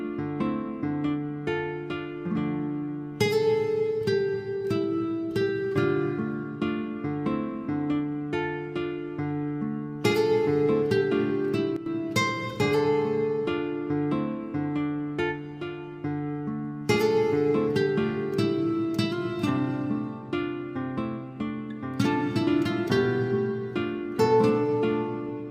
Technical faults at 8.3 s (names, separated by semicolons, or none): none